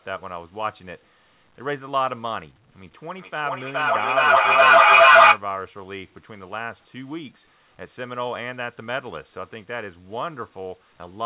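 A speech clip with feedback echo between two devices from 2.95 to 5.44 s. Each phrase returns at roughly 0.4 s intervals, thinner and more ringing each pass, and the repeats build rather than decay, peaking about 16 dB above the speech. A second device on the same call is replaying this microphone's audio, which is picked up again, and neither echo canceller removes the other device's output. The band-limit at 4 kHz fits telephone-grade G.711 coding.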